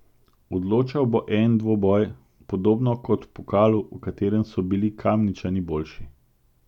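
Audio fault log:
No faults are audible anywhere in this speech clip.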